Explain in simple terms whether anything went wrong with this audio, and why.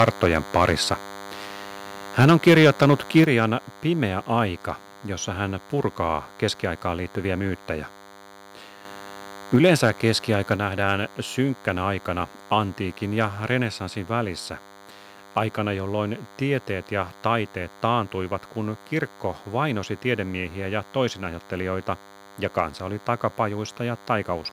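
Several things went wrong, and they are all on the microphone side of the recording.

A DECT cordless phone buzz runs under the whole clip. It is a thin, steady buzz at 100 Hz with a gritty edge from many harmonics. It sits well below the speech level but is always there. It comes from a nearby cordless phone or its base station, which sends a short radio pulse every 10 ms. The recording circuit picks up those pulses and turns them into sound.

Microphone overload is heard three times: from the start to 0.93 s, from 2.19 to 3.21 s, and from 9.54 to 9.89 s, just before "keskiaika nähdään synkkänä aikana". In those stretches the loudest moments turn harsh and crackly. The likely cause is that the microphone input was set too high, so the peaks ran past the most the converter can record and their tops were sliced off.

Microphone volume stepped down happens three times. There is a small drop at 2.24 s, a bigger one at 3.24 s, and another small one at 9.56 s. 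Each time the speech and the background get quieter together, all at once, and each drop falls during or right after a crackly overload passage. The likely cause is the call software noticing the distortion and lowering the microphone's input setting in a single jump.

Microphone volume stepped up happens once, at 8.85 s. Speech and background suddenly get clearly louder together, in one jump rather than a gradual swell. This is the call software deciding the microphone had become too quiet and raising the input setting. Less than a second later, at 9.54 s, the sound overloads again and the software pulls the level back down.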